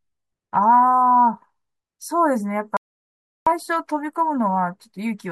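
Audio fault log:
2.77–3.47 s, audio dropout to silence: the speech cuts off mid-flow and about 0.7 s later resumes just as abruptly, with nothing at all in between, not even the room's background hiss. Complete silence like this means the input most likely vanished, through a lost connection or an accidental mute, while recording carried on writing silence. On the waveform the trace collapses to a flat line, and the spectrogram shows a clean, empty vertical band across every frequency.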